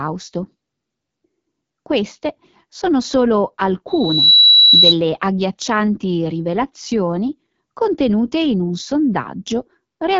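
Loudspeaker feedback squeal from 3.87 to 4.95 s interrupts this speech clip, starting right after "sono solo" and ending before "agghiaccianti rivelazioni contenute in". A single tone near 3.9 kHz swells over roughly 0.4 s until it sits around 10 dB above the speech. A microphone was picking up the loudspeaker it fed, and at that one frequency the loop gain passed unity, so the tone kept feeding on itself until the amplifier limited it or the loop was broken. AMR wideband (HD Voice) codec damage runs through the whole recording. Nothing is present above 7.4 kHz, and the speech has the rough, raspy texture of the codec's lowest modes, which fits a rate around 8.85 kbit/s. At that setting the pulse-excited vocal tract model captures too little detail below 6.4 kHz, and the band above is only synthetic noise shaped to resemble speech.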